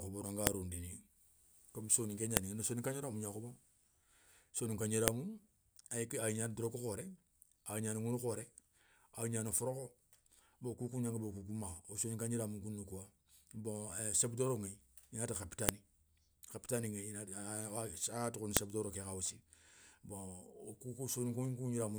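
Sharp, loud clicks cut through the speech at 0.47, 2.37, 5.08, 15.69 and 18.57 s. The one at 2.37 s falls between "comme soninké" and "ni soninka". This is a file header played as audio. Separate pieces were joined with their WAV headers intact. Those header bytes play back as a brief snap at each join, after "i na ti" and before "doro ké kha aussi".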